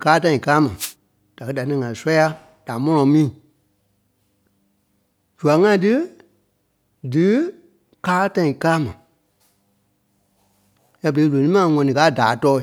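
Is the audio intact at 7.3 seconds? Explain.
Yes, the speech at 7.3 seconds plays through intact, with no dropout, click, distortion or other audible fault at that point.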